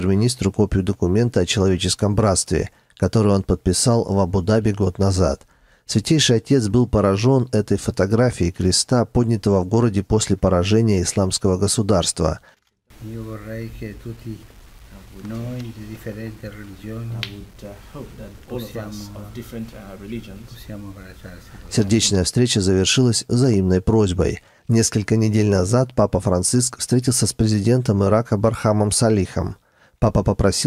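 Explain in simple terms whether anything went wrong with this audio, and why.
Nothing went wrong: no dropouts, glitches, clicks or other faults turn up anywhere in the clip.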